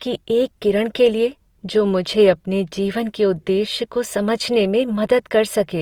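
From start to finish the speech has a rough, grainy texture, most likely from Opus compression in its music-style CELT mode at a rate that fits about 24 kbps. When bits run short, the encoder fills the bands it can't afford with folded or noise-like content. Unlike MP3, the spectrum keeps few swirly holes, and the band stays full, reaching about 20.2 kHz, instead of sounding muffled.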